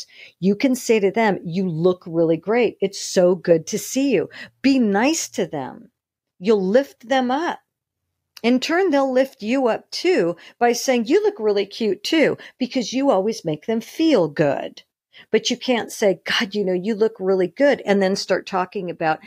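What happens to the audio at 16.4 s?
Nothing goes wrong at 16.4 s: the speech carries on intact, with no dropout, click, distortion or other fault at that point.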